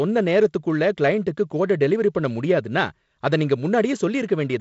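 No technical faults can be heard in this speech clip, which comes through G.722 wideband telephone coding with nothing above about 7.7 kHz.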